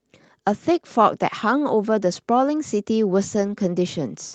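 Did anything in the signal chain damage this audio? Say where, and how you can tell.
Yes, at the network stage: lost packets rebuilt from error correction, in two places. From 2.11 to 2.13 s, consistent with one lost 20 ms packet, and again from 3.39 to 3.57 s, suggesting about five separate ones, the sound turns briefly rougher and noisier with no gap. The receiver played the low-bitrate redundant copy carried in the next Opus packet instead. On a waveform the envelope stays continuous. On a spectrogram those spans show smeared, grainier harmonics inside the call path's 8 kHz band.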